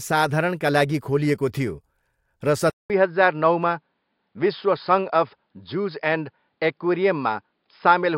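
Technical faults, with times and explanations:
2.70 s to the end, input switched to a poorer device: after about 0.2 s of silence, the speech comes back duller and boxier, with nothing above roughly 5.1 kHz and a new, faint noise floor sitting well below it, while the level stays about the same. That's likely the recording hopping to a different microphone or a headset's call profile, whose narrower band and own noise take over for the rest of the clip.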